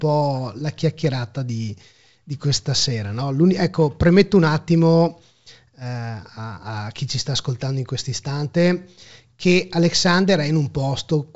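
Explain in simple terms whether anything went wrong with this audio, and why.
Nothing went wrong: the speech sounds like ordinary G.722 wideband telephone coding, which carries sound only up to 7.7 kHz, so the missing top end is how that phone system works, not damage.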